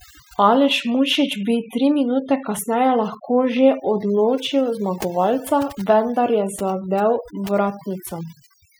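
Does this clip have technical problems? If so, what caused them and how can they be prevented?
Yes. Overdone noise removal runs through the whole speech clip. A noise reduction stage set too aggressively has cut individual frequency bands whenever their level sat close to its noise estimate, so the background collapses to near silence speckled with twinkling artefacts, and quieter voice components were removed along with the noise. Prevent it by using gentler reduction settings and checking the result by ear before committing.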